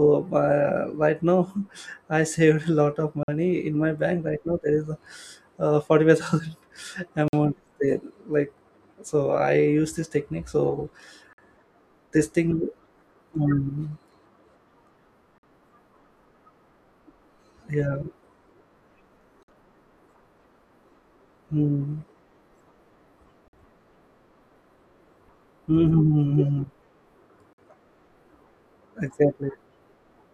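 At 3.23, 7.28, 11.33, 15.38, 19.43, 23.48 and 27.53 s, the speech drops out for 50 ms each time: a gap between chunks. The audio was delivered in 4-second pieces, with silence left at every join while nothing is actually lost. It is heard as a brief, hard-edged hole recurring at a steady rhythm. On a waveform, each shows as a flat line with abrupt edges; on a spectrogram, a thin vertical blank band across all frequencies.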